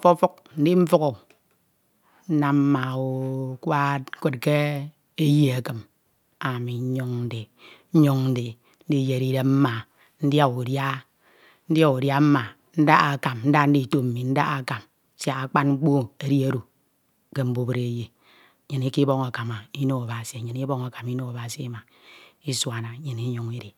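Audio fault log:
Nothing stood out on listening to this speech recording.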